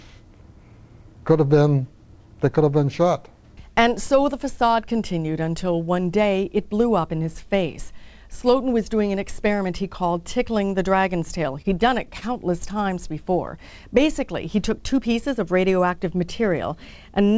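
At 11.62 to 11.66 s and again at 12.18 to 12.24 s there is a short stall from a late packet. Each time, the jitter buffer ran dry and the receiver stretched the last sound, by 26 ms and then 39 ms, before resuming where it left off. Nothing is lost, but the sound holds unnaturally with a faint buzz or dip. A spectrogram shows brief horizontal smears of repeated texture below the 8 kHz ceiling of the G.722 call path, and the waveform shows short repeating cycles.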